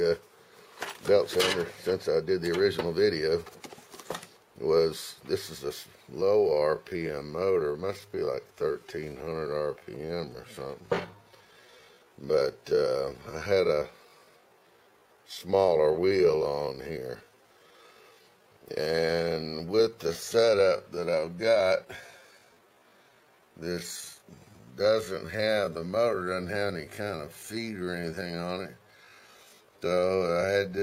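From 6.17 s to the end, a time-stretched section slows the audio to about 0.65 times its pace, likely through software stretching that repeats short pieces, leaving it dragging at unchanged pitch.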